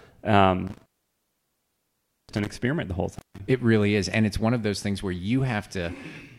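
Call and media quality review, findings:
Intermittent contact on the speech path, 0.67 to 2.47 s (open about 1.43 s) and 3.13 to 3.40 s (open about 0.16 s). Signal drops out with crackle at each edge and faint hiss in the gap. Likely a loose cable or plug opening momentarily.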